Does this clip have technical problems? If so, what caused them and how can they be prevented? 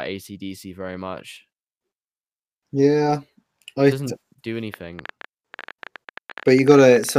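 Yes. From 4.74 s to 7.18 s a train of clicks sits over the speech: around thirty similar sharp pops at an uneven pace averaging 13.6 per second, peaking at about 5 dB above the speech and audible in the gaps as well. The likely cause is impulsive interference from nearby equipment or a faulty connection or power supply. To prevent it, move or power down nearby electrical gear, use shielded cables, and check connections and the power supply.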